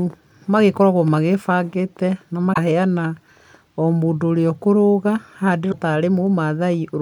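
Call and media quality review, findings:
Damaged data in the compressed stream: two short glitches in the speech, 2.52–2.58 s and 5.68–5.74 s, about 56 ms each. Probable component is the decoder input. Corrupt bytes throw the decoder off, it loses frame sync and hunts for the next header.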